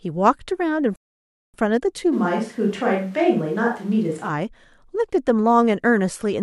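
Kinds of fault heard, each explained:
Rebuffering stall: At 0.96 s the speech drops into dead silence and picks up again at 1.54 s from exactly the point where it stopped, so nothing is skipped but the clip runs about 0.58 s longer. That clean break followed by a seamless resumption is the mark of a player starving for data: its buffer of downloaded audio ran empty, playback halted, and it waited for more to arrive before carrying on.
Switch to a distant microphone: From 2.14 s to 4.28 s the voice abruptly turns roomy and hollow, losing body in the low end, with background noise rising to roughly 30 dB below the speech, while the overall level stays about the same. The sudden change in and back out likely comes from the close microphone's signal dropping away, leaving only a microphone placed farther from the talker, such as one on a camera.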